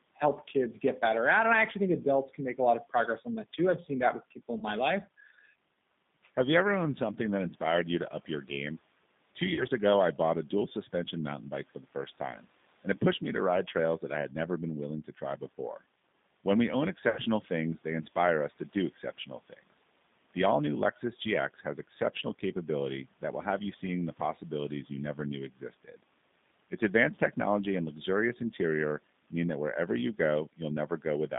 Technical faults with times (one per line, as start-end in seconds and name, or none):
0.00-31.39 G.729 codec
4.58-4.64 VoIP packet loss concealed by the speech codec
9.55-9.65 VoIP packet loss concealed by the speech codec
17.09-17.21 VoIP packet loss concealed by the speech codec
25.56-25.95 speech cut by the noise suppressor